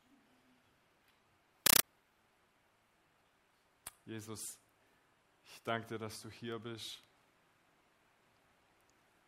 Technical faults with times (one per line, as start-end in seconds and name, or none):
1.66-1.83 compressed stream played as audio